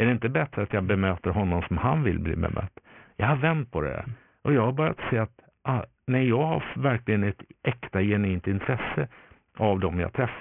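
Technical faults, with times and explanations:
Throughout: aliasing. The audio was resampled to a lower rate without an anti-alias filter, and the band ending at 3 kHz points to a 6 kHz rate. Content above 3 kHz did not disappear. It folded back below that edge as unrelated, inharmonic frequencies, sitting roughly 15 dB under the speech. Sibilants and fricatives come out gritty and metallic, and energy runs hard up to the 3 kHz band edge.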